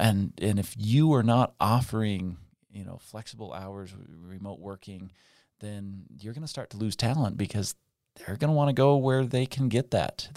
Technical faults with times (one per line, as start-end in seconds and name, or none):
6.58-7.02 zipper noise